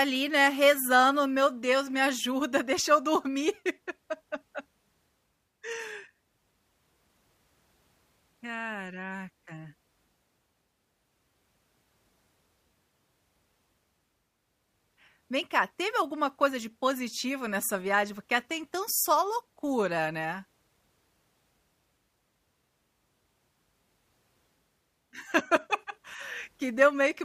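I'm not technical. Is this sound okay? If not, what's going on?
Yes, nothing in this speech recording points to a technical problem with the signal.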